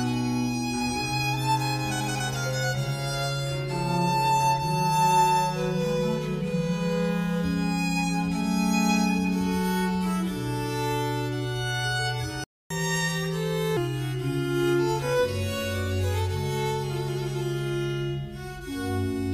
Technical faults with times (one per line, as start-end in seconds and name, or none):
12.44-12.70 playback stall
12.70-13.77 catch-up at higher speed